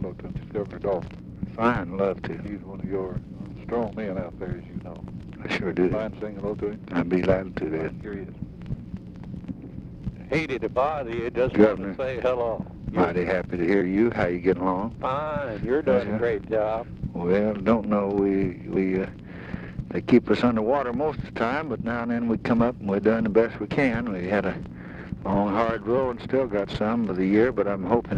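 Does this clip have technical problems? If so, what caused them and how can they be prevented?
Yes. At 23.71 s the sound skips abruptly, losing about 50 ms. This is likely audio missing between chunks, lost while one 5-second block closed and the next opened. Double-buffering the recorder so the next chunk starts before the last one closes prevents it.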